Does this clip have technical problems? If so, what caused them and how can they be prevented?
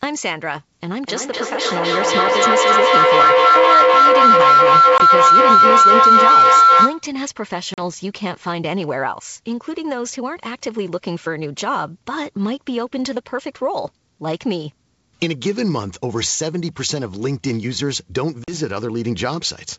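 Yes. Feedback howl runs from 1.03 to 7.15 s. Two devices on the same call share one room, so each trip from microphone to loudspeaker and back adds level. Instead of dying away, the repeats build and narrow to the pitch the loop favours, about 1.5 kHz. The tone peaks about 11 dB above the speech and pulses at roughly 0.3 s, the loop's round-trip delay. It stops only when the loop is broken. To prevent it, mute all but one device in the room or use headphones.

Packet loss on an ADPCM call causes three hard-edged silent gaps: 20 ms at 4.98 s, 40 ms at 7.74 s and 40 ms at 18.44 s. These fit one lost packet and then two. The link is G.722 wideband coding, itself clean at this rate, and it builds each sample from an adaptive prediction and step size. A missing packet leaves the decoder's predictor and step size out of step with the sender's, so the signal just after each hole is briefly misjudged before it settles. 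To prevent it, use a steadier network path, or a jitter buffer with loss concealment that resynchronises the decoder.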